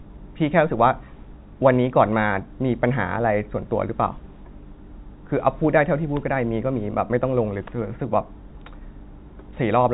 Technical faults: none

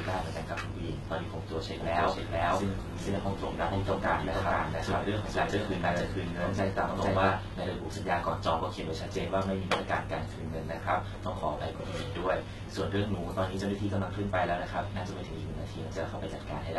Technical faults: HE-AAC compression; doubled audio track

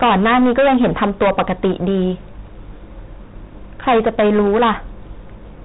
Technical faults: hard clipping

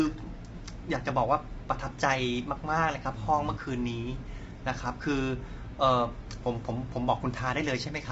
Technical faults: low-delay AAC compression

